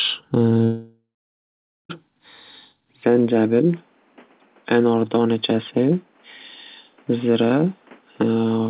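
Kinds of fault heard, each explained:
Long network dropout: From 0.64 s to 1.91 s, about 1.26 s of sound never arrives. The receiver briefly extends the last sound as a fading tail, then leaves about 0.86 s of silence before the audio resumes without the lost part. A network outage is the likely cause.
Input switched to a poorer device: At 3.03 s the tone turns duller and boxier, with no gap and no level jump. Content above 3.6 kHz disappears, narrower than the call path's 4 kHz limit, and a new noise floor sits roughly 35 dB below the sound. The likely cause is a switch to another microphone.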